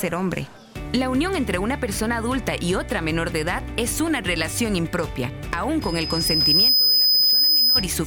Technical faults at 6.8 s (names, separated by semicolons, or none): loudspeaker feedback squeal